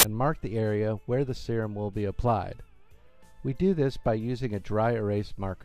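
At the very start, from 0.00 to 0.03 s, a file tags played as audio fault appears: an embedded cover picture's compressed bytes are decoded as samples, giving a hard-edged burst of very loud white noise. The waveform shows a solid, dense block of very high level, and the spectrogram a flat, broadband vertical slab.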